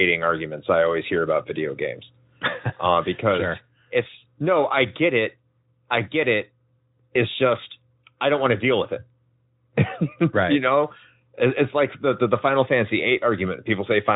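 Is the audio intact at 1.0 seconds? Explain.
Yes, the speech is intact at 1.0 seconds, with only the band-limited sound of the Speex codec, which carries nothing above about 3.8 kHz.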